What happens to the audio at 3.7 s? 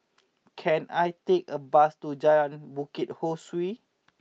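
Nothing goes wrong at 3.7 s; the speech there plays through intact, with no dropout, click or other fault.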